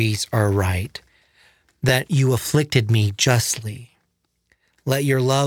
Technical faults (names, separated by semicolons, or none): overlapping chunks